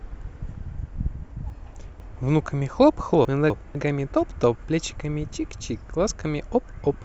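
A speech clip with chunks out of order, twice: 1.5 to 2.0 s and 3.25 to 3.75 s. Each time, a 250 ms chunk arrives one chunk late and plays after its successor. Nothing is missing, but the swap jumbles the sound and leaves three hard joins.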